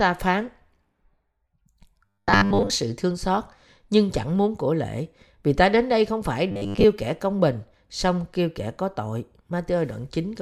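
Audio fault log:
2.06–2.71 s and 6.52–6.85 s, robotic sound from repeated short buffers: the speech turns into a rigid metallic buzz at 100 Hz, first just before "sự thương xót nhưng", then between "đến đây không phải" and "kẻ công bình song". Audio likely arrived too seldom, so a 10 ms slice was replayed for most of each stretch while real audio was skipped. That steady repeat rate sets the fixed pitch.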